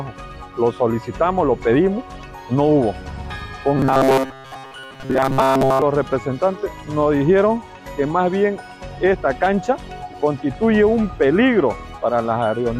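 Robotic sound from repeated short buffers runs from 3.77 to 5.83 s: the audio turns into a rigid, metallic buzz near 133 Hz. The likely cause is playback starving for data and looping a segment of about 7.5 ms, repeating it for most of that stretch while the real audio is skipped.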